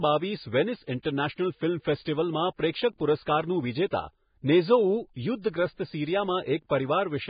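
Vorbis compression runs through the whole of this speech recording, likely the result of encoding at a very low bitrate, one that fits roughly 15 kbps. Nothing is present above about 4.9 kHz, so the sound is dull and band-limited. What treble remains is quantised so coarsely that its fine detail turns into hiss-like noise of similar energy, giving a grainy, roughened texture and softened consonant attacks throughout.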